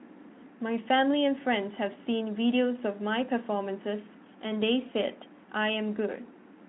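No technical faults occur anywhere in the speech, so there is nothing to place in time order.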